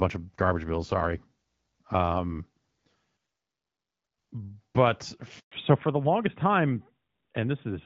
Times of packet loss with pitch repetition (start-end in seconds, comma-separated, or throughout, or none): none